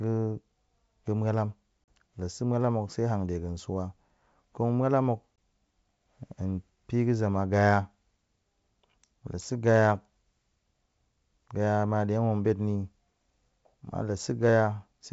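Packet loss on an ADPCM call cuts the speech at 1.84–1.93 s (40 ms lost, about two packets) and at 5.38 s (20 ms). Each loss shows as a flat, hard-edged gap in the waveform and a blank vertical stripe across the spectrogram. After each gap the decoder's predictor and step size are out of step with the sender's, so the speech comes back slightly distorted before settling. The G.722 wideband band up to 7 kHz stays visible on either side of the gaps.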